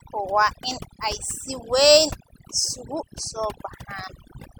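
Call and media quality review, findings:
Overdone noise removal throughout: background dropped, breaking into twinkling specks, quiet parts of speech lost. Over-aggressive noise suppressor muting bands near its noise estimate; unlike codec artefacts, gaps track quiet passages.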